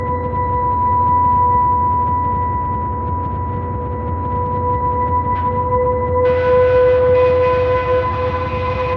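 Nothing goes wrong anywhere in this clip, so there's no fault to walk through here.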